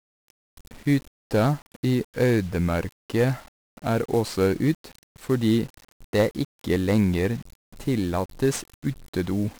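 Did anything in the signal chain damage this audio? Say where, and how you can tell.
Yes, at the codec stage: 1-bit DFPWM compression across the whole speech clip. Each sample steers the adaptive level up or down, so heavy broadband quantisation noise makes everything fuzzy and crackly, with hiss burying the treble. A spectrogram shows a noise floor raised across all frequencies, and the waveform looks jagged. The damage points to a very low rate, around 48 kbps.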